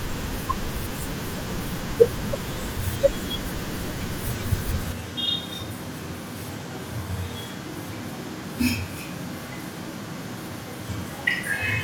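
A speech clip with a switch to a distant microphone at 4.93 s, lasting to the end. The voice suddenly turns roomy and hollow, loses bass and drops by roughly 5 dB. Room noise rises to around 30 dB below the speech. The close microphone likely failed.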